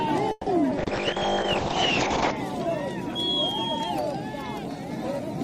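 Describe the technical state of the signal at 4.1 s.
At 4.1 s the signal is intact, with no dropout, distortion or other technical fault to be heard at that moment.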